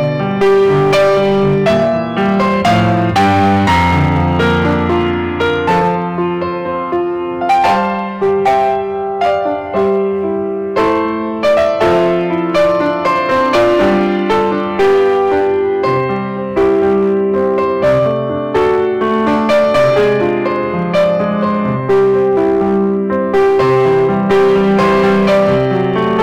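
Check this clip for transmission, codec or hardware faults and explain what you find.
Hard clipping runs through the whole clip. Some stage in the chain was driven about 9 dB beyond what it could pass, so every peak that reached the ceiling was sliced flat, and a large share of the waveform, roughly one sample in seven, sits pinned at the limit. Those squared-off tops generate harmonics high up the spectrum, so rather than occasional crackle on peaks, every loud passage carries a harsh, gritty fuzz.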